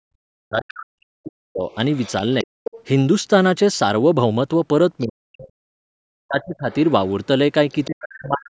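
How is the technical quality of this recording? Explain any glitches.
The recording has two recurring glitches, both typical of a call under double talk.

Speech suppressed in double talk appears from 0.0 to 2.49 s, 5.03 to 6.71 s and 7.86 s to the end. The speech dips sharply, roughly 40 dB at worst, likely because the echo canceller turned everything down.

The other side's voice leaking through is heard from 0.82 to 2.81 s at fairly high level, briefly at 5.00 to 5.04 s, and faintly from 6.41 to 7.87 s. This is likely residual loudspeaker echo that the echo canceller did not remove.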